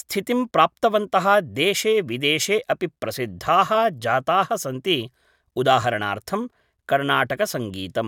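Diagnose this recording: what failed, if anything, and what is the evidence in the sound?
Nothing in the chain seems to have gone wrong here, and there's nothing in the speech that points to trouble at any stage.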